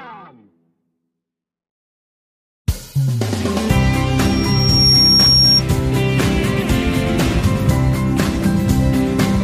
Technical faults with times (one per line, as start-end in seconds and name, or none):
4.19-5.63 loudspeaker feedback squeal